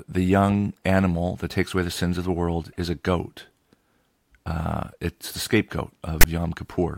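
A speech clip with one fault near the end. From 6.21 to 6.25 s, a short burst of harsh static cuts in with hard edges. This is file tags played as audio. A block of text tags is being read as sample values. The text bytes give a loud rasp offset to one side of zero. The zero padding that follows reads as a stretch of silence.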